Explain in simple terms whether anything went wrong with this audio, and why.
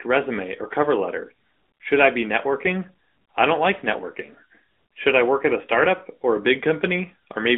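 The speech sounds thin, boxy and buzzy from start to finish, like a call on an older mobile phone. This is the AMR narrowband mobile codec, plainly audible here. The line carries only about 200 Hz to 3.5 kHz, so the low warmth and the crisp upper detail are missing. The codec also rebuilds the speech from a simple model of the mouth and throat rather than keeping the real sound, which leaves that synthetic edge.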